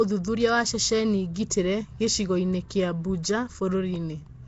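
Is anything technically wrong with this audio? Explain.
Yes. Throughout the speech, the signal was likely squeezed through Nellymoser compression, coding short blocks with too few bits, which fits a low rate near 32 kbps. Weak bands are replaced by noise, giving a rough, hissy, underwater smear, and nothing remains above 7.8 kHz.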